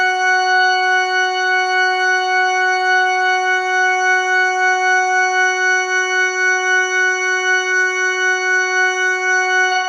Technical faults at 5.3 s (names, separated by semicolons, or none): none